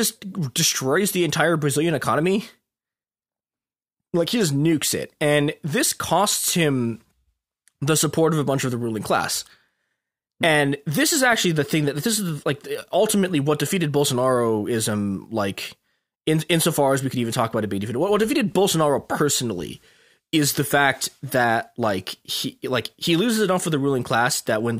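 No technical faults can be heard anywhere in it.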